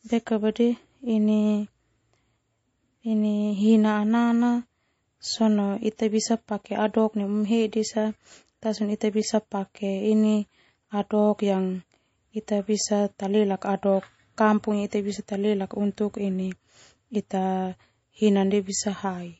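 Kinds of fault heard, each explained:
MP3 compression: throughout, the speech sounds watery and swirly with nothing above 7.7 kHz, likely from an encoder starved of bits, which fits 32 kbps.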